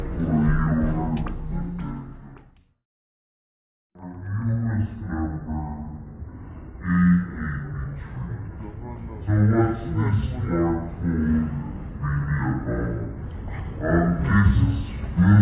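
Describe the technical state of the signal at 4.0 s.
At 4.0 s the wrong sample rate fault is present, as it is across the whole clip. Everything runs at half speed and a full octave (12 semitones) low, which fits audio recorded at 16 kHz being played back at 8 kHz without conversion. On a spectrogram every component sits at half its proper frequency, with nothing above 4 kHz. The waveform looks stretched to twice its natural duration.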